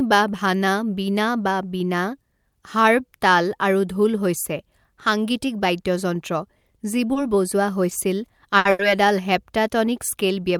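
Short stalls from a late packet occur at 7.13 to 7.17 s, 8.58 to 8.67 s and 8.71 to 8.81 s. Each time, the jitter buffer ran dry, so the receiver held the last speech sound for 20, 70 and 80 ms until the packet arrived. Nothing is lost, but sounds drag briefly.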